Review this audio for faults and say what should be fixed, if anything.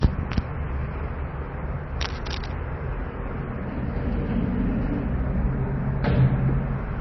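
Heavy MP3 compression runs through the whole clip. Nothing is left above 6 kHz, and the remaining detail has a watery, swirling texture where weak frequency components drop in and out between frames. The likely cause is an encoder starved of bits, and the damage points to a very low bitrate of around 24 kbps. A plain low-pass filter would dull the top without this shifting, bubbling texture. To prevent it, encode at a much higher bitrate or keep a lossless copy.

Cable scratch noise appears from 2.00 to 2.52 s as a dense, uneven burst of scratchy rustling, roughly 10 dB below the sound. It is likely a worn cable, connector or control being moved, with contact resistance fluctuating rapidly. Clicks or dropouts would be brief isolated ticks or gaps. This is a continuous ragged texture lasting about half a second. To prevent it, replace or clean the faulty cable or connector and secure it so it cannot move during recording.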